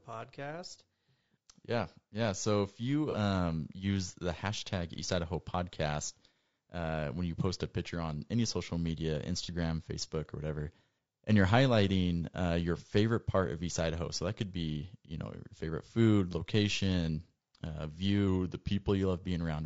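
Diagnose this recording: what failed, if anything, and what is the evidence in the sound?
The speech is rough and grainy throughout. Noise sits between the harmonics, and the top band sounds thin and synthetic. This points to the codec stage, likely low-delay AAC compression of the AAC-ELD kind used for video calls. Its short frames resolve pitch harmonics poorly and spend bits inefficiently, so at a rate that fits roughly 32 kbps the harmonic structure breaks up into audible noise. The damage is plainly audible.

Two brief smeared, noisy patches occur, one from 3.11 to 3.15 s between "if you" and "use the hashtag", and one from 9.44 to 9.49 s just after "on any social media". Each points to AAC frame loss with concealment in the network or decode path, with a single frame of about 30 ms missing. The decoder rebuilt the gap from the previous good spectrum, which produces the phasey, blurred texture rather than a clean dropout.

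From 18.27 to 18.89 s, just after "favorite food location uh", the speech slows by about 5.5 % and drops about 98.5 cents, close to a full semitone, then snaps back to normal. Speed and pitch move together, which points to the buffer stage, likely a drift correction step. Clock-matching software changed the playback rate in one jump to refill its buffer and then released it.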